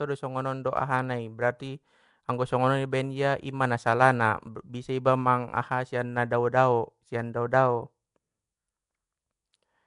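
From start to finish the speech carries a rough, hissy halo and a smeared, underwater quality, which points to likely Nellymoser compression, the old Flash microphone codec, at a rate fitting about 44 kbps. Coding short blocks with a fixed two bits per sample starves weaker bands, which get noise instead of detail. A spectrogram would show grainy, blocky texture between harmonics and nothing above 10.6 kHz; the waveform looks fuzzy around its envelope.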